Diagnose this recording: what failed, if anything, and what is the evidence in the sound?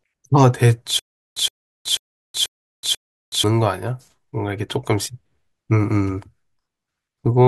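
Stutter with silent gaps from 0.99 to 3.44 s: a 117 ms burst repeats five times between 372 ms silences, likely a stalled playback buffer.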